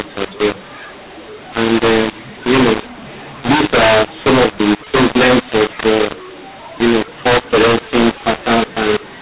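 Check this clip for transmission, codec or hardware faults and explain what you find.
One fault runs through the whole clip: mu-law and A-law mixed up. Speech coded with the mu-law version of G.711 is decoded with the A-law rule. Because the two logarithmic curves disagree, levels are scrambled, with some too loud, some too soft, and near-silent samples pushed well up. The voice sounds harsh and gritty, and pauses fill with hiss. On a waveform the gaps never settle near zero, and a spectrogram shows broadband noise smeared between phrases. The telephone band itself stops at 4 kHz, which fits normal 8 kHz G.711 sampling.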